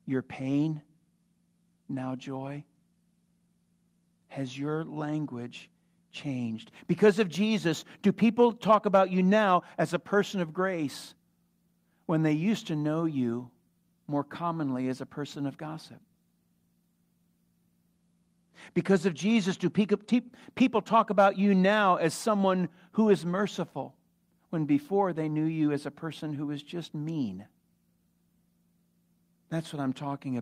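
Speech recording, no technical faults detected anywhere in the clip.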